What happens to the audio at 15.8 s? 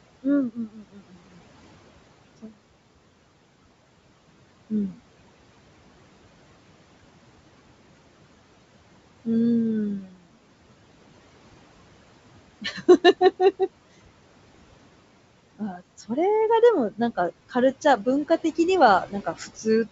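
Speech cut by the noise suppressor, from 15.58 to 16.1 s. The suppressor mistakes part of the speech for background noise and turns it down by as much as about 18 dB. Roughly a fifth of a second of sound comes out swallowed and faint.

Noise suppressor artifacts run through the whole clip and are present at this moment too. The suppressor lowers the steady room noise by about 21 dB between phrases, letting it rise again under the speech.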